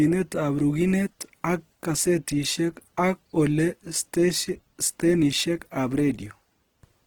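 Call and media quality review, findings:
Opus compression, whole clip, 0 to 7 s. Speech rough and grainy throughout, damage plainly audible. Tonal parts of the voice turn noisy, not swirly. Bandwidth stays full, content up to about 20.2 kHz. Likely cause: CELT music-mode encoding at a low rate, fitting roughly 16 kbps. Starved bands get filled with folded or noise energy.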